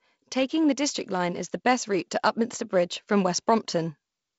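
No technical faults are audible.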